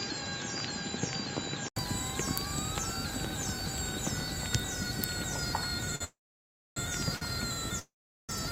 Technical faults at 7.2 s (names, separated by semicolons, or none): short stall from a late packet